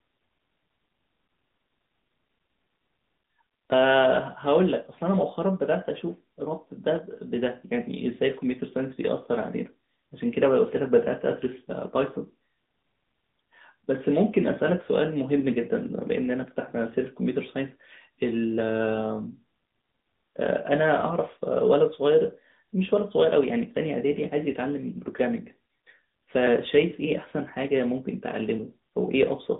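Throughout, the speech has passed through the AMR narrowband mobile codec, at a rate that fits the 10.2 kbps mode. The line is confined to 150 Hz to 3.7 kHz, with nothing above 3.8 kHz, so the voice sounds muffled and phone-like, with plainly audible buzzy, synthetic coding damage.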